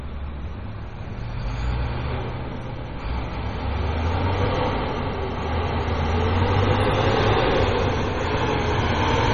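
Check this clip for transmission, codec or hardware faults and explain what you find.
There's one fault, running through the whole clip, and it sounds like heavy MP3 compression. Nothing comes through above 10.6 kHz, so the top end is simply gone. That's the encoder chopping treble when it's starved for bits, which points to something around 32 kbps. Quieter frequency detail is being dropped and restored frame by frame, so the sound takes on a watery, swirling texture, and sharp onsets come out smeared rather than crisp. A low-bitrate MP3 encode is the likely cause.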